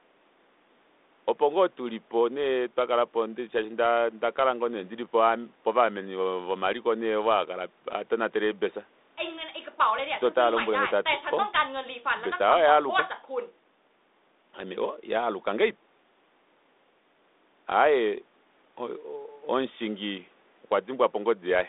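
No technical faults can be heard in this speech.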